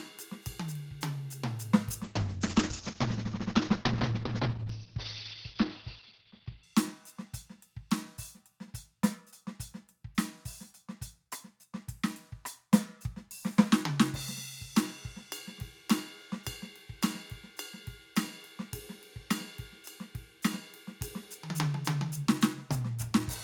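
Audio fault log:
2.04–6.69 s, call bitrate drop: the music turns coarse and watery, with treble above 6 kHz gone where it previously reached 20 kHz. This fits an encoder starved from around 128 kbps to roughly 8 kbps, held at its lowest for about 4.6 s.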